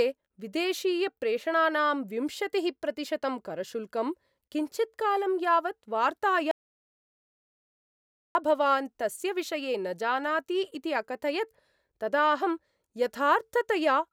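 At 6.51 s the speech cuts off abruptly into an audio dropout to silence lasting about 1.84 s, until 8.35 s. The gap is silent with no room tone, likely a lost input link while recording continued, and the speech resumes mid-flow.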